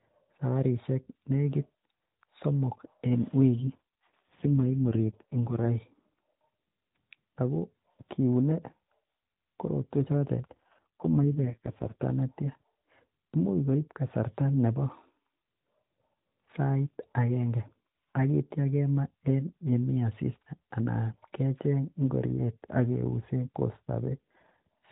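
AMR rate drop, from 3.61 to 5.67 s just after "somok en", and again from 10.52 to 12.04 s just after "korotuen choton". Both times the speech turns rougher, buzzier and more synthetic, with the same narrowband ceiling near 4 kHz and no gap. The link appears to have weakened and the codec switched to a leaner mode, moving bits into error protection. The change in texture fits a step from 12.2 down to 4.75 kbps, and clarity returns once the higher rate resumes.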